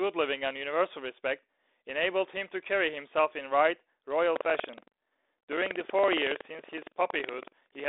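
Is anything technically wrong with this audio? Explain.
Yes, from 4.32 s right through to the end there's buffer tearing. The app writing the ring buffer and the hardware reading it have drifted, so each period ends up with roughly a tenth of its content from the previous lap, around 100 ms stale, spliced in with hard edges. You hear that as a gritty, robotic rattle at 21.5 Hz, which fits a 2048-sample buffer, sitting on top of the speech and its telephone-band G.726 sound.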